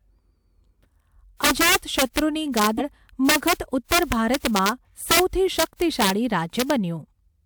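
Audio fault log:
1.44–2.19 s, 2.57–2.67 s, 3.29–3.53 s, 3.92–4.69 s, 5.11–5.20 s, 5.59–6.10 s, 6.60–6.70 s, integer overflow: violent cracks on loud speech peaks, sharper than clipping, because peaks pushed about 1 to 7 dB past the integer limit wrapped to the opposite sign.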